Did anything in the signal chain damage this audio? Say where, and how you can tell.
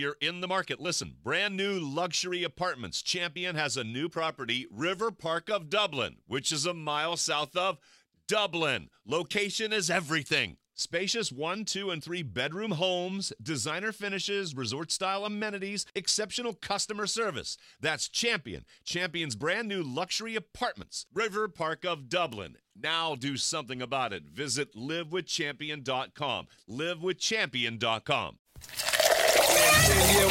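Yes, a bit error spike at 22.33 s: one sharp, broadband tick at about -24 dBFS over two samples, from a flipped bit in memory or a digital link.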